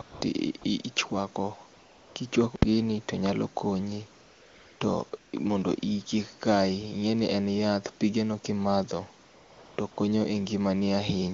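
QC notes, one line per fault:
0.01–9.97 s, AMR comfort noise: nine pauses, 20 to 580 ms long, where the phone stopped sending speech frames and the receiver substituted smooth synthetic noise, notably before "kichwako gini to nyalo" and after "en yath pigeno kimadho". Unlike a dropout, it switches in and out rather than going silent.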